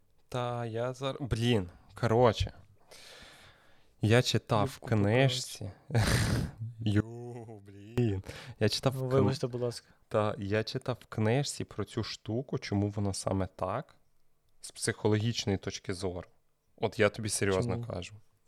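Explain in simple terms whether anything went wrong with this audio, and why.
One channel inverted, from 7.00 to 7.98 s: the voice nearly vanishes to a faint trace, likely because one stereo side was flipped and cancelled the other.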